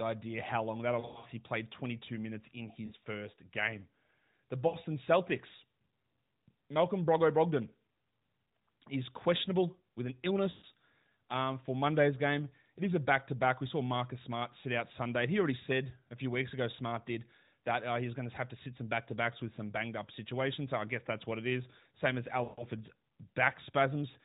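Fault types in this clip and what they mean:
lost AMR speech frames: brief dips and warbles where the speech smears and thins, losing 60 to 200 ms at a time, worst just after "how long that'll". Radio errors corrupted frames, so the decoder kept repeating its last good pitch and vocal tract settings at falling gain.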